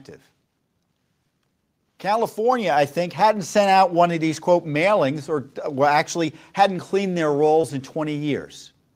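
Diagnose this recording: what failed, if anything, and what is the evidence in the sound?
At 2.52 s the speech and the background noise behind it jump up together by about 4 dB in a single step, and the new level holds from there on. Because the noise floor rises with the speech, this isn't the talker getting louder. It's a microphone volume step-up at the call-processing stage: the call software judged the input too quiet and raised the device's capture volume all at once.

Between 7.61 and 7.65 s there is a brief smear, where the sound seems to stretch and wobble for an instant before settling back. This is short concealed packet loss on the network path: about 20 ms of audio never reached the decoder in time. The receiver filled roughly 18 ms of the gap by extrapolating the preceding sound, then crossfaded back into the real signal as it resumed.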